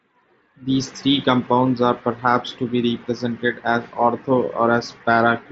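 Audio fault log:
No faults are present: the speech arrives over a Bluetooth mSBC headset link at 61 kbps, with content reaching up to 7.7 kHz and nothing above it, as expected for that wideband codec.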